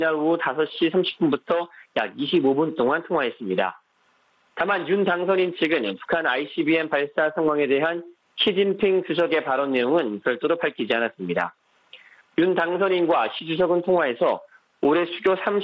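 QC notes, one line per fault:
throughout: gain pumping, gain swings about 15 dB on loud sounds; likely overdriven gain into a fast limiter.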